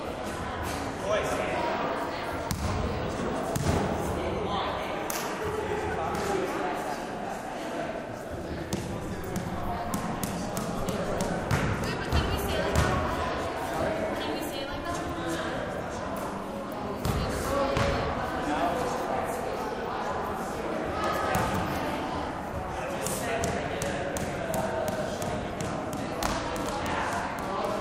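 From 1.59 to 4.16 s a hard 50 Hz buzz with gritty hash above it sits well below the sound, joined by a whine at 15.6 kHz. This is video or display buzz: a screen or video cable coupling into the audio at its field and line rates.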